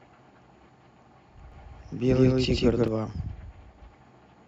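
A doubled audio track runs from 1.52 to 2.88 s. A full-band copy of the speech trails about 150 ms behind at roughly equal loudness, dry, starting and stopping abruptly. A slower second capture path or an out-of-step edit is the likely cause.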